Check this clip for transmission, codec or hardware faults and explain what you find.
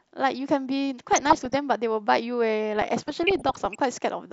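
The clip is speech with two bursts of DAB burbling, from 1.12 to 1.57 s and from 2.75 to 3.75 s. Weak reception lets bit errors slip past error correction into the MP2 data, so corrupted samples put short noise blips in individual sub-bands and corrupted scale factors make sub-bands jump in level for up to a frame. That produces burbling blips over the speech, pointing to a bit error rate under one percent.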